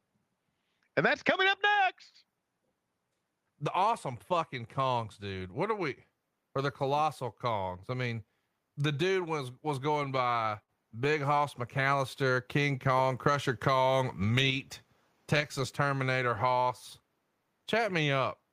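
Right after "the dude was was", from 10.03 to 11.27 s, the speech shows repeated stalls (stutter). Late packets drained the jitter buffer nine times, and each gap, the longest 53 ms, was filled by extending the last sound. About 121 ms was concealed and nothing lost, so delivery drags and catches.

From 11.81 to 12.35 s a jitter buffer slow-down follows. The receiver rebuilt its reserve by repeating short pitch periods and pause fragments, adding 38 ms. Playback runs at 94% speed with unchanged pitch, so syllables sound slightly drawn out.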